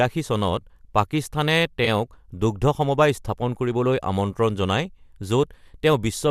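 At 1.85 to 1.88 s a brief smeared, noisy patch blurs the speech for an instant. This is AAC frame loss with concealment: about 20 ms of coded audio, likely two short low-delay AAC frames, went missing, and the decoder filled the hole by reusing the last good spectrum with altered phase, so the gap is covered rather than heard as a dropout.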